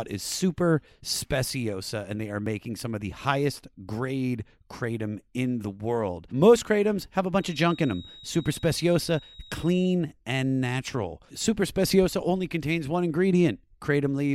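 At 2.46 s, between "and they are" and "some of the highest", a brief skip of a few milliseconds is heard; this is likely audio missing between chunks, and it recurs at 8.46 s, 6 s later. From 7.32 s to 10.0 s, after "kratoms have a" and before "and natural", a thin 3.8 kHz whistle that slowly swells and fades sits about 25 dB below the speech, likely a feedback whistle from a loudspeaker-to-microphone loop held just short of runaway.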